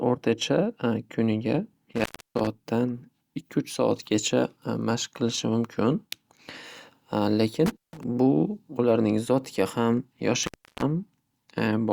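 Intermittent contact breaks the speech at 1.92 to 2.47 s, 7.66 to 8.04 s and 10.43 to 10.83 s, with the line open for about 0.31, 0.16 and 0.33 s. A loose connection momentarily opens the signal path, and the crackle at each break's edges sets it apart from a clean digital dropout.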